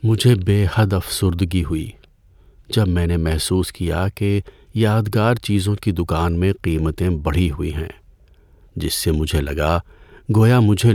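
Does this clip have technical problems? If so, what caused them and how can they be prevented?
No, there are no technical problems to point to in this recording. Nothing in it calls for a cause to be traced or a fix to be made.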